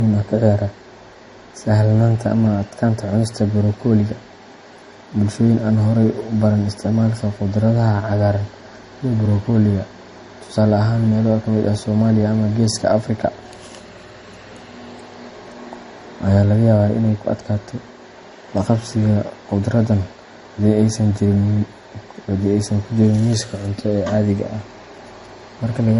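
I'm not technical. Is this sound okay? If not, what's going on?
No. Throughout, the speech sounds dull, with the artefacts of two different codecs heard together. Nothing above 11 kHz survives. This is likely transcoding between lossy codecs: the audio was saved as MP3, then compressed again as Opus, so both layers of damage add up.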